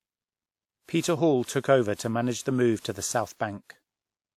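Generation loss runs throughout the speech: the sound is swirly, smeared and hollow, with blurred attacks and nothing above 19.4 kHz. This is likely from repeated lossy re-encoding, about five passes of a WMA codec near 96 kbit/s, each adding fresh quantisation noise.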